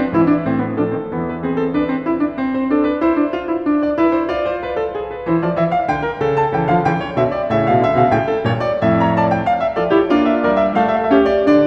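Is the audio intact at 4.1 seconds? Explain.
Yes, the music is intact at 4.1 seconds, with no dropout, click, distortion or other fault at that moment.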